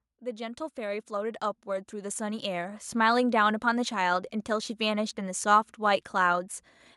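From 0.06 to 3.27 s the speech and background swell together by about 12 dB: automatic gain rising, as the gain control slowly boosts input it judged too quiet.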